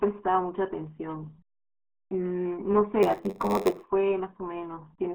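From start to finish the speech passes through the RealAudio 14.4 codec, an 8 kbit/s dial-up speech coder. The band runs roughly 250 Hz to 3.6 kHz, with nothing above 4 kHz. What separates it from ordinary telephone band-limiting is the heavy gargly, muffled coding damage layered on top.

Between 3.02 and 3.88 s a block size mismatch (padded) appears. One stage writes shorter blocks than the next reads, and zeros fill each gap. That puts a steady 93.8 Hz buzz on the speech, which fits a 512-sample read buffer, and slows it to 0.938 times speed with its timbre unchanged. Random dropouts would not sound like this, because the gaps are perfectly regular.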